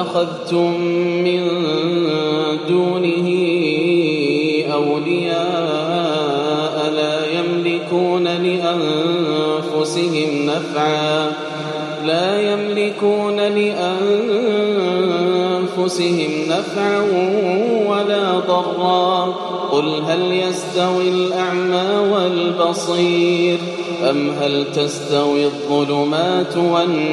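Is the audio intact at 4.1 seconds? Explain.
Yes, the audio at 4.1 seconds is intact, with no dropout, click, distortion or other fault audible at that moment.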